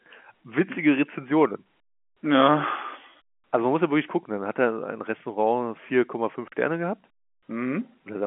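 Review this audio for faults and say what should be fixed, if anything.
Nothing in this recording needs fixing. The speech carries the narrow band of G.711 telephone coding, roughly 200 Hz to 3.4 kHz with nothing above about 3.8 kHz, as expected for a 64 kbps A-law telephone line.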